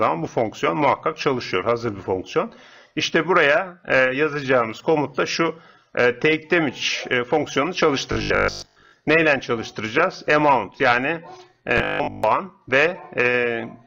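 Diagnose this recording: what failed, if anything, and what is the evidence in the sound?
Likely driver buffer underruns, replaying 20 ms blocks in place of most of the audio, cause robotic sound from repeated short buffers: a rigid 50 Hz buzz at 8.12–8.92 s and 11.78–12.24 s.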